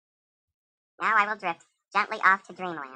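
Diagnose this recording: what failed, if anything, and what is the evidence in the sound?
A wrong sample rate at the playback stage: the samples are clocked out 1.5 times faster than they were captured, with no resampling, which fits 32 kHz material sent to a 48 kHz output. From start to finish the speech runs at 1.5 times normal speed and its pitch rises by 7.02 semitones, so voices sound high and rushed. Speed and pitch shift together by the same ratio throughout, the signature of a rate mismatch rather than deliberate pitch or tempo processing.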